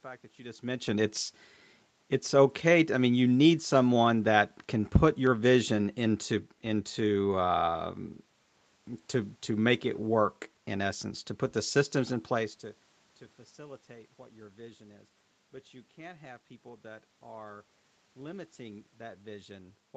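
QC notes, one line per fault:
Nothing to flag here; the room noise and the level shifts when the talker moves around near 0.5 s and 12.5 s are just part of the recording, not system faults.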